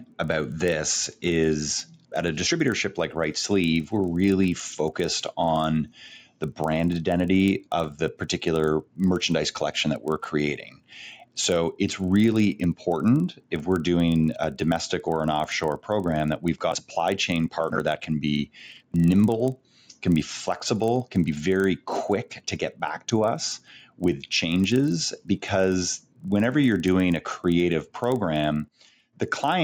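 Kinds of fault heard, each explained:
Resampler restarted on every block: each 40 ms block converted from 16 kHz to 48 kHz separately, leaving edge errors heard as a 25 Hz buzz, visible as evenly spaced spikes and vertical stripes.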